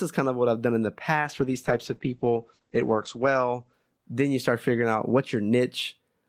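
Right after "I've done in the", from 1.22 s to 5.57 s, there's a call bitrate drop: the encoder gets starved, which fits a fall from about 64 kbps to 10 kbps. The sound turns coarse and muffled, with the top end cut from 20 kHz to 8 kHz.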